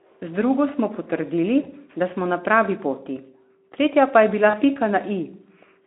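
VoIP packet loss concealed by the speech codec occurs at 1.63–1.71 s, just before "da smo na", and at 4.49–4.55 s, after "poti tretja pa je". About 20 ms and 40 ms went missing, and the decoder extrapolated the speech into a brief, fading buzzy or noisy smear that lingers as weakness after recovery.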